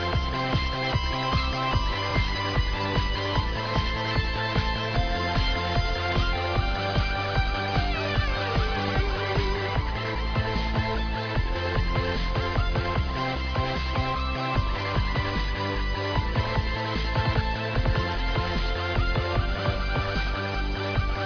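Nothing stood out as a technical fault anywhere in the recording on listening.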